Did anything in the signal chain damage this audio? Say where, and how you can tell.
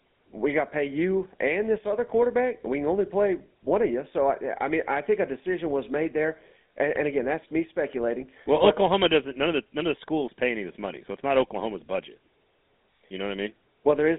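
Yes, at the codec stage: the whole clip carries GSM full-rate codec damage. The speech has a plainly audible buzzy, gravelly roughness and a narrow telephone band, roughly 200 Hz to 3.6 kHz. On a spectrogram, energy stops flat near 3.8 kHz, and harmonics look smeared and noisy. This fits the 13 kbps full-rate coder, which models the vocal tract and rebuilds the excitation from sparse, regularly spaced pulses.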